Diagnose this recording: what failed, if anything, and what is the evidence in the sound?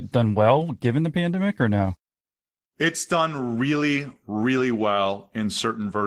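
Nothing in the recording points to a failure at any stage of the chain. No stage from capture through to playback leaves an audible trace of a problem in the speech.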